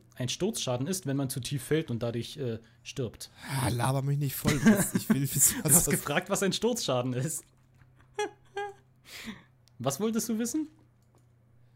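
From 1.39 to 1.92 s the sound slows by 6.2% and drops about a semitone, then snaps back. From 7.19 to 9.58 s it runs 6.2% fast, a semitone sharp. Both are likely drift correction steps, where clock-matching software abruptly changed the playback rate.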